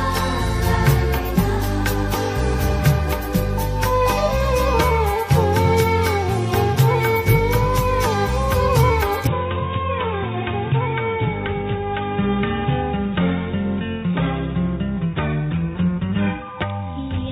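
At 9.27 s the sound abruptly turns dull and boxy until the end, with nothing above 3.8 kHz, about 5 dB quieter, a new faint noise floor, and no gap. That points to a likely input switched to a poorer device, not a simple filter.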